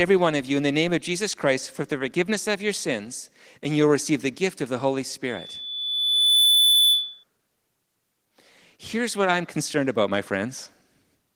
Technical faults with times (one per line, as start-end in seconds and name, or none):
5.26-7.24 loudspeaker feedback squeal